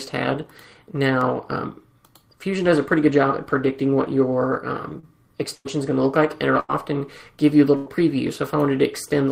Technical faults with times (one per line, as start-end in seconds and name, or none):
4.99-6.71 repeated packet loss (robotic sound)
7.76-7.89 burst of packet loss
7.86 lost packet rebuilt from error correction